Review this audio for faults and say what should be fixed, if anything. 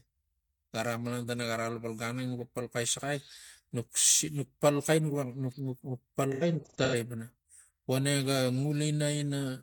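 AAC frame loss with concealment between 6.32 and 6.95 s: about 0.34 s of audio is missing, scattered across that span in short gaps, the longest roughly a tenth of a second. The decoder patches each gap from the last good spectrum, producing a smeared, phasey texture. Prevent this with forward error correction or retransmission on the transport carrying the AAC stream.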